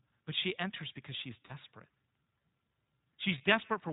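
Speech, coded throughout with the iLBC codec. The damage is plainly audible. Nothing above 4 kHz passes, and the voice sounds rough and synthetic. Each 20 ms frame is coded on its own, and the sound fits a rate near 15.2 kbps. There are lost iLBC frames from 1.46 to 1.52 s, just after "she enters because she's", and from 3.38 to 3.41 s. The first gap fits two lost 20 ms frames, and the second fits one. In each gap the decoder repeats the last pitch cycle mixed with noise. It sounds like a held vowel, buzzy or breathy. The voice recovers almost at once because the frames stand alone.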